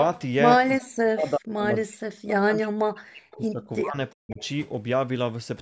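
From 0.78 to 3.96 s the speech keeps sinking and breaking up, dropping by about 40 dB at its deepest, for around three seconds in total. That's speech suppressed in double talk, likely the far side talking at once and the echo canceller ducking everything. It happens again briefly from 4.17 to 4.4 s.

Around 3.31 to 3.38 s there's a faint scrap of the voice returning about 367 ms late, at about 25 dB down. It comes back from 4.3 to 4.49 s at about 30 dB down. That's echo leak: likely a loudspeaker's echo canceller didn't catch everything its microphone heard. With the call's microphone processing there's nothing above 8 kHz.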